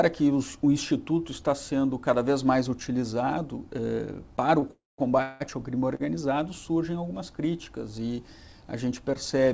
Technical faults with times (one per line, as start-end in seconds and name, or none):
4.60-4.64 short stall from a late packet
4.71-5.42 call audio freeze
5.95-6.02 short stall from a late packet